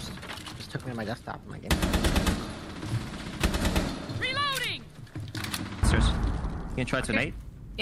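Nothing stood out on listening to this audio.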